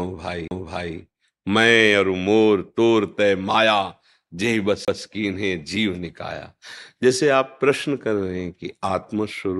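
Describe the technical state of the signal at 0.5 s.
A CD skip occurs here, from 0.48 to 0.51 s: the laser lost its track and landed on a different turn of the spiral, so the player muted for about 30 ms. The speech cuts out with a small tick and resumes abruptly from another point.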